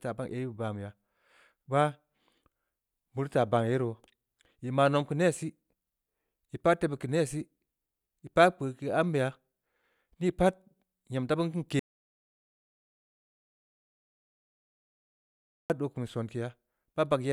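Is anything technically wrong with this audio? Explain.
Yes. There's an audio dropout to silence from about 11.79 s to 15.70 s, so roughly 3.9 seconds of the speech just vanish. The sound cuts off mid-flow and the gap is dead silence, with no room tone or hiss underneath. That's what you get when the input stops arriving but the recorder keeps writing silence, likely from a dropped connection or a brief mute. Whatever was said in that stretch is gone.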